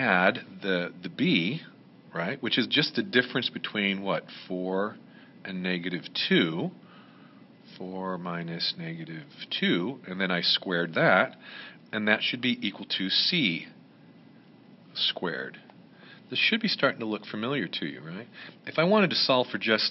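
No technical faults can be heard anywhere in the recording.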